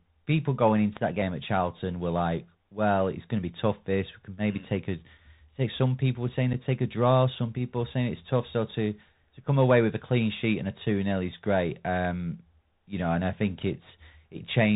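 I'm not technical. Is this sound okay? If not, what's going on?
No. The Bluetooth CVSD headset codec affects the whole clip. The speech travels as a simple up-or-down signal that can't carry anything above 4 kHz, so the voice sounds muffled and phone-like, with a grainy hiss underneath and scratchy s sounds.

Unconcealed Bluetooth headset packet loss happens at 6.53 s, between "people were saying" and "take a draw". A single packet of audio, about 7.5 milliseconds, went missing between headset and phone, and nothing covered the gap. You hear a tiny abrupt hole that can click.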